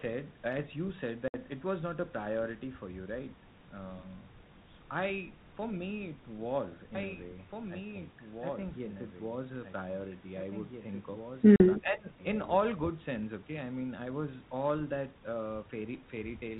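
At 1.28 s the speech drops into a hard-edged silent gap lasting 60 ms, a case of packet loss on an ADPCM call. The loss points to about three packets. When the sound resumes, the decoder's adaptive predictor and step size no longer match the sender's, so the return is slightly distorted before it settles. On a waveform this shows as a flat gap with squared ends. On a spectrogram it is a blank vertical column. The same fault recurs at 11.56 s with a 40 ms hole, consistent with about two packets.

From 11.78 to 12.19 s the speech dips by as much as around 20 dB for a total of about 0.4 seconds. This is speech suppressed in double talk, most likely an echo canceller mistaking simultaneous talk for loudspeaker echo and attenuating it. The waveform envelope sags and pinches in that span. Throughout the clip the audio stops at about 4 kHz with only light coding hiss, which fits 32 kbit/s G.726 ADPCM.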